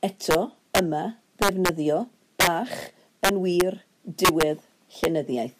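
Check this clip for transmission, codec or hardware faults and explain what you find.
The speech has repeated integer overflow faults, at 0.31–0.35 s, 0.75–0.79 s, 1.42–1.69 s, 2.40–2.47 s, 3.25–3.61 s, 4.25–4.43 s and 5.04 s. On loud peaks, about 1 to 6 dB over full scale, the samples wrap to the opposite extreme instead of limiting, giving harsh cracks. The waveform shows sudden full-range sign flips; the spectrogram shows broadband vertical streaks.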